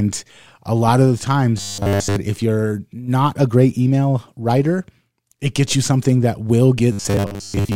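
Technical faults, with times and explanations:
1.58–2.16 s: robotic sound from repeated short buffers. The entire stretch becomes a rigid 100 Hz metallic buzz, likely from 10 ms chunks replayed. Unlike steady hum, the buzz follows the speech rhythm.
6.92–7.75 s: robotic sound from repeated short buffers. Most of this stretch has the same fixed 100 Hz buzz, likely from 10 ms repeats. It is pitch-locked and buzzy, not stuttering or gapped.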